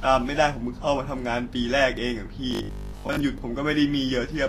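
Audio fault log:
throughout: Vorbis compression. The speech has nothing above 14.2 kHz, and the damage is plainly audible as hiss and graininess in the upper range, with roughened tones and smeared consonant onsets. This is likely the result of low-quality Vorbis coding, which fits a bitrate in the region of 36 kbps. At such a setting the encoder lowers its cut-off and quantises the treble residue so coarsely that fine detail is replaced by noise of similar energy over its spectral floor.
2.51–3.21 s: robotic sound from repeated short buffers. For most of this 0.7 s stretch the speech turns into a rigid, metallic buzz at 50 Hz that follows the underlying signal only loosely. The likely cause is audio arriving too seldom, with the playback side filling the gaps by looping the last 20 ms segment while fresh material is skipped. Each repeat restarts the same short block, and that repetition sets the fixed 50 Hz buzz rate.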